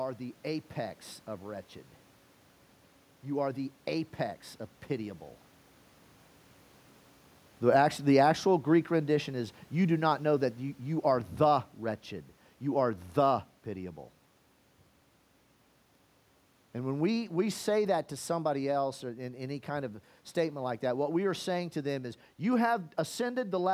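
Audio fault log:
7.58–13.58 s, automatic gain falling: the speech and the room noise behind it sink together by about 7 dB over six seconds. The automatic gain control judged the input too loud or its background noise too strong and gradually lowered its gain across the whole signal.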